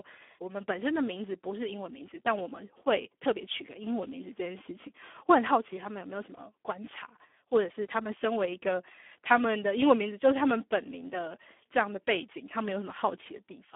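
From start to finish the speech carries heavy Speex codec damage, hoarse and noisy, edging toward robotic, consistent with about 8 kbps squeezing the excitation, squeezed into a 250 Hz to 3.4 kHz band with nothing above 3.7 kHz.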